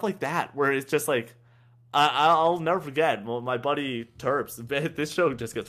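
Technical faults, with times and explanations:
No technical faults can be heard anywhere in the speech. Nothing in the sound calls for a time or an explanation.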